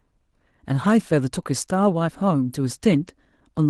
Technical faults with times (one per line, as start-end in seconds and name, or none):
0.00-3.70 clock drift between sender and receiver
0.12-3.66 repeated timing corrections